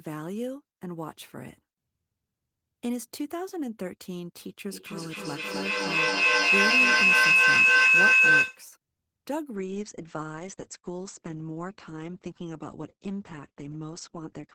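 At 4.73 s a feedback howl starts. Sound from a loudspeaker is returning to a microphone on the same call and gaining level on each trip. It narrows to a tone near 3 kHz, pulsing about every third of a second. It peaks about 14 dB above the speech and stops at 8.71 s.

At 9.57 s a call bitrate drop sets in and lasts to the end. The encoder is coding far more coarsely, which fits a fall from 32 to 10 kbps. The top end is cut off at 8 kHz. The speech turns muffled and rough.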